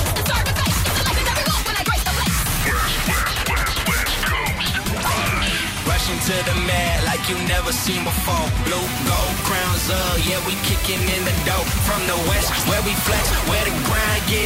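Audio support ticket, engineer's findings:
Low bit depth with dither from 8.82 s to end. Sudden constant, even hiss about 10 dB below the signal; fits 4-bit requantisation with dither. Unlike undithered truncation, no gritty distortion following the signal; noise stays flat and signal-independent.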